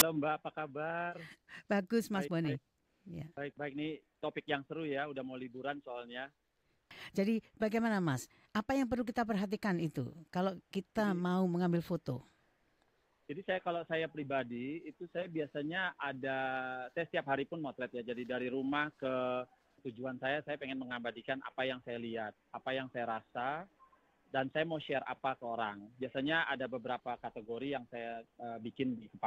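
At 0.0 s the audio opens with a tiny, hard-edged burst of very loud white noise, a click of static lasting barely an instant. This is file tags played as audio: an embedded cover picture, stored as compressed data, was read out as if it were samples.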